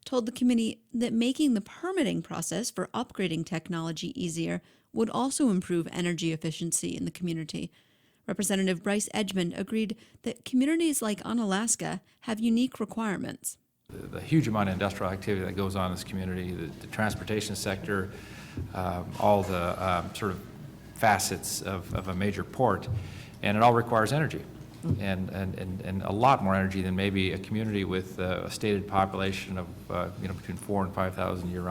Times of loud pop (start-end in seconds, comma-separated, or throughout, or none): 9.31-9.33, 28.99-29.01